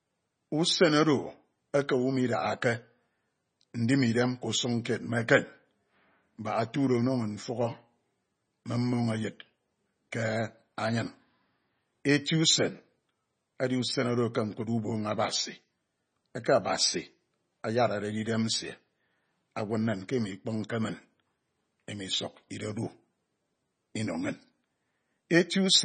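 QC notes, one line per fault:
Throughout: MP3 compression, likely. Nothing survives above 9 kHz, and the speech has a watery, swirling texture with chirpy sibilants and smeared onsets. Weak frequency lines switch on and off between frames, which fits a starved bitrate around 24 kbps. A plain low-pass filter would dull the top end just as cleanly but leave the remaining sound steady, without this frame-to-frame warble.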